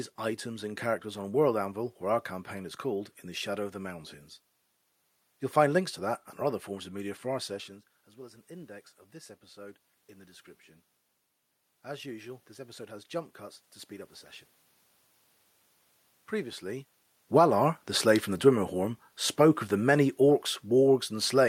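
From 6.99 to 10.54 s, and again from 11.69 to 14.19 s, automatic gain rising lifts the level by 4 dB each time, chasing a speaker who moved back around 7.5 s. Voice and room noise swell together. From 17.21 s to the end, after the talker moved near 16.5 s, automatic gain falling eases the level down, so speech and background sink together.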